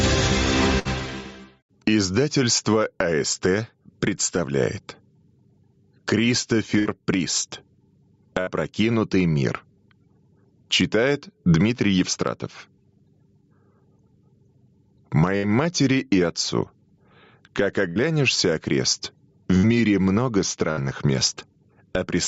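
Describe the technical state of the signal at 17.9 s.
At 17.9 s there is a burst of packet loss from 17.89 to 17.99 s. About 67 ms of the last sound is held and faded, then the audio resumes with about 60 ms skipped. On a spectrogram this shows as smeared, repeated frames fading out. The waveform shows a decaying envelope, then a sudden resumption.

Gain pumping also runs through this moment, with the level swinging by roughly 15 dB. The likely cause is input gain set far too high, with a fast limiter clamping each loud sound. On the waveform the peaks look flattened.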